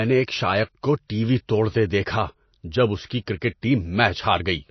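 MP3 compression damages this speech clip throughout, plainly audible from start to finish. Nothing remains above 6 kHz, the treble cut a starved encoder applies, and weak frequency lines flicker between frames, giving watery, swirly sibilants and smeared attacks, likely from a bitrate near 28 kbps.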